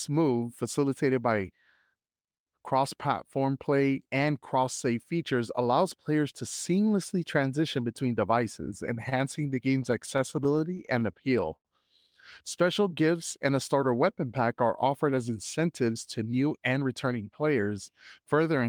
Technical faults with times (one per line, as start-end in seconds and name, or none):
9.09-11.03 repeated stalls (stutter)
11.56-11.67 short stall from a late packet
12.65-13.18 jitter buffer slow-down
15.17-17.07 jitter buffer speed-up